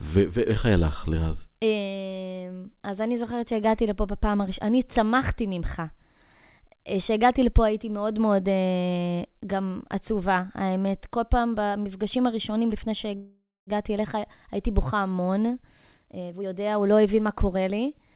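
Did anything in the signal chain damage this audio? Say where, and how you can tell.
Yes. At the network and jitter-buffer stage there is a call audio freeze from 13.16 to 13.70 s. The sound smears into a fading buzz or hiss, with about 230 ms of near silence, then resumes with nothing lost. The likely cause is delayed packets draining the jitter buffer. On a spectrogram this shows as a held horizontal band that decays into a blank column. The waveform shows a decaying tail and then a flat stretch.

A jitter buffer speed-up runs from 15.75 to 17.78 s. The speech plays at about 124% speed with unchanged pitch and sounds hurried, because the receiver trims short pitch-period slices totalling about half a second to shed the extra delay. On the waveform, the syllables are compressed. On the spectrogram, which is empty above 4 kHz as G.711 is, the harmonics keep their height while the syllables narrow.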